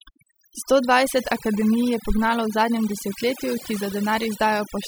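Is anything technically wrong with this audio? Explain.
Yes. Overdone noise removal runs throughout this speech clip. Noise reduction set too aggressively pulls individual frequency bands down or off wherever they sit near its noise estimate, taking quieter parts of the voice along. The background drops and breaks up into twinkling specks.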